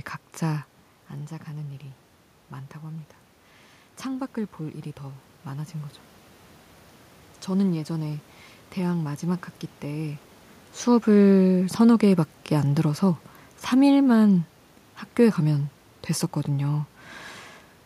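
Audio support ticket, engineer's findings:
Automatic gain falling, 10.87 to 15.47 s: AGC judged input too loud or its background noise too strong and pulled its gain down gradually, about 4 dB total. Speech starts loud, then sinks steadily with its room noise. Level shifts near 0.5 s and 10.5 s are talker movement, not system.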